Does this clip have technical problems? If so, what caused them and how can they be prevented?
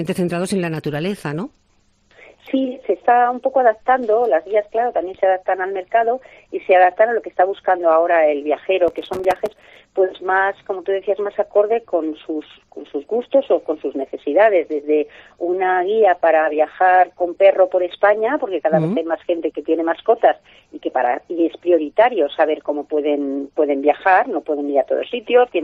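Yes. From 8.88 to 9.77 s a gritty burst of crackle tears through the sound. This is processor overload crackle: the processor missed dozens of buffer deadlines again and again over that stretch, each buffer only a few milliseconds long, leaving hard-edged silent gaps. Prevent it by reducing the processing load or using a larger buffer.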